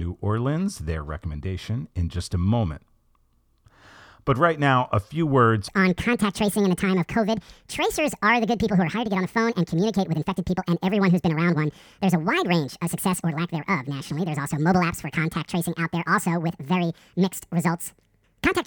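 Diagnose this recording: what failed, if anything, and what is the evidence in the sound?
Section at the wrong speed, from 5.68 s to the end at 18.66 s: the speech abruptly becomes hurried and high, running about 1.75 times faster with pitch raised by roughly ten semitones, since speed and pitch shift together. The stage is most likely playback or an editing step where this segment was resampled or clocked at the wrong rate, so the samples are read out too quickly instead of being time-stretched.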